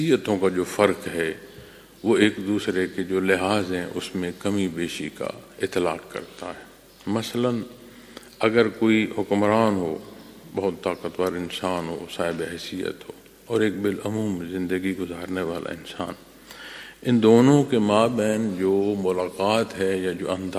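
No technical faults can be heard anywhere in this recording.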